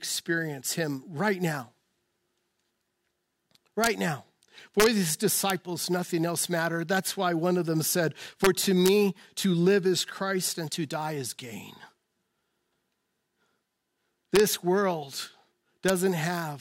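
Integer overflow cracks hit the speech at 3.84–3.87 s, 4.80–4.86 s, 5.50 s, 8.44–8.47 s, 8.86–8.89 s, 14.36–14.40 s and 15.89 s. Peaks only about 1 dB over full scale wrap to the opposite sign instead of being limited, so each snaps across the whole range as a violent crack, much sharper than clipping.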